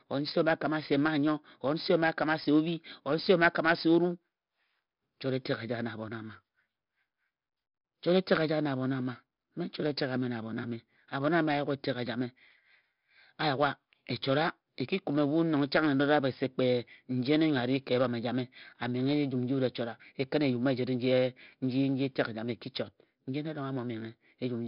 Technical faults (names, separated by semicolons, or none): 4-bit ADPCM compression